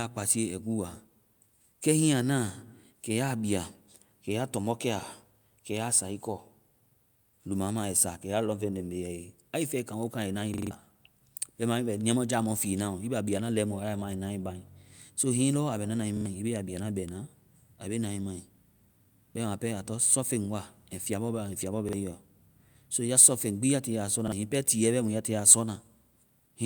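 At 10.54 s the speech stutters as a slice of about 43 ms, which fits a 2048-sample buffer, plays four extra times with a hard join at each repeat. It happens again at 16.17 s with two extra plays, and at 21.89 s and 24.28 s with one each. This is a repeated buffer: fresh audio arrived late, so the device replayed its last block, losing roughly 150, 100 and 40 ms of speech. A dropout would leave silence, and echo would decay, but here the copies are identical.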